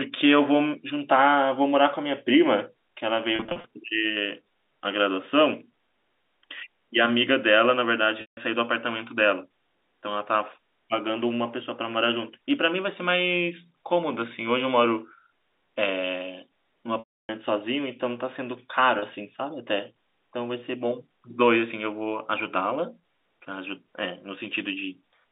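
Packet loss with pitch repetition occurs at 3.36–3.64 s, 8.21–8.37 s, 16.99–17.29 s and 18.99–19.02 s. The receiver filled each gap by repeating the last pitch period. The first gap is 190 ms of scattered dropouts, each 40 ms or shorter, and sounds buzzy and held. The 160 ms and 300 ms gaps fade toward silence before a short cross-fade back, and the final 30 ms gap is a brief held buzz. The G.711 telephone band is audible throughout.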